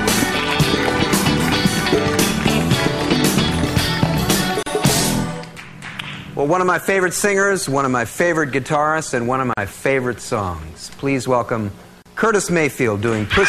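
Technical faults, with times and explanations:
Throughout: video or display buzz. A screen or video cable couples into the audio, adding a 60 Hz field-rate buzz with hash, roughly 30 dB below the sound.
4.63–4.66 s, 9.53–9.57 s, 12.02–12.06 s: gap at a join of encoded pieces. Untrimmed encoder delay and padding leave silences of 37, 41 and 34 ms with edges smeared by the codec.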